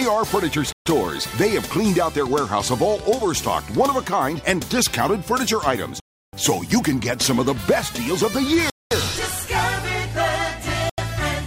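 At 0.72, 6.0, 8.70 and 10.90 s the sound drops to dead silence for 135, 330, 212 and 85 ms, then resumes: a likely Bluetooth stall, appearing as flat waveform gaps and blank spectrogram columns.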